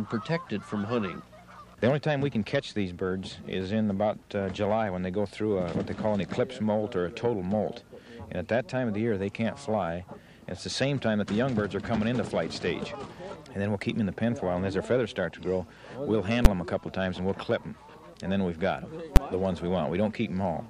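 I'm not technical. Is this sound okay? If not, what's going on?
No. There are two sharp, very loud bangs, at 16.45 s and 19.16 s. Each is a case of invalid numbers at full scale: a calculation in the processing went wrong and produced values that aren't real numbers, and these were pushed to an extreme value far beyond the sound's normal peaks. Each bad stretch lasts only about 10 milliseconds, so instead of a loud burst with silence inside it, you hear a single bang.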